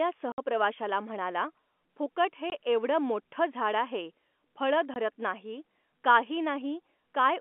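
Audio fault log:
0.32–0.38 s, 2.50–2.52 s (after "म्हणाला फुकट हे"), 4.94–4.96 s (after "मोठ्ठं झाड आहे फळं"): packet loss filled with silence. Gaps of 60, 20 and 20 ms, which fits lost 20 ms packets replaced by silence, cut the sound abruptly at hard edges. The waveform drops to a flat line, and the spectrogram shows blank vertical stripes, all within the narrow telephone band.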